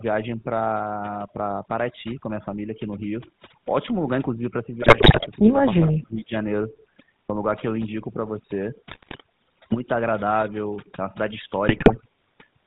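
Throughout, overdone noise removal leaves near-silent gaps dotted with twinkling specks; a spectrogram shows the background carved into isolated flickering dots. On top sits the GSM full-rate codec, giving a buzzy, gravelly roughness with nothing above 4 kHz, visible as a hard ceiling in the spectrogram, at a rate that fits 13 kbps. From 4.82 to 5.28 s, GSM bit errors corrupt the decoder's filter, pitch and gain values, so the voice squawks, pops and gargles, with sudden level spikes in the waveform and smeared, bent bands in the spectrogram. From 5.86 to 6.33 s the voice dips by roughly 20 dB for about half a second, likely speech suppressed in double talk, where the echo canceller turned down the talker while the other side spoke. The envelope shows a sharp trough there. GSM bit errors return from 8.90 to 9.22 s and from 11.68 to 12.01 s, with the same gargling bursts and spiky, distorted frames.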